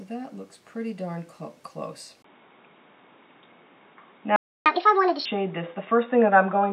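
At 2.22 s there is a brief gap of about 20 ms. After it, the sound turns dull and boxy. The level also shifts by about 5 dB, and new background noise appears, roughly 40 dB below the signal. This points to an input switched to a poorer device, likely a different microphone or a headset's call profile. The narrow band lasts to the end at 6.73 s.

At 4.36 s the sound stops dead in mid-flow. The silence lasts about 0.3 s, until 4.66 s. This is a playback stall. The player's output went quiet because it was likely starved of data or its thread was held up. The sound then resumes.

From 4.66 s to 5.26 s the sound runs fast and high. This is catch-up at higher speed. To recover the time lost in the stall, the player resamples its backlog at 1.5 times normal speed. Because speed and pitch rise together, everything sounds roughly seven semitones sharp and hurried. At 5.26 s both return to normal.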